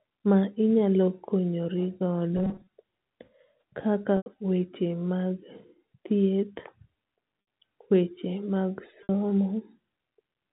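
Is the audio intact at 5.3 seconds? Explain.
Yes, the speech at 5.3 seconds is intact, with nothing there beyond the narrow, telephone-band sound of its G.711 coding, which passes nothing above 4 kHz.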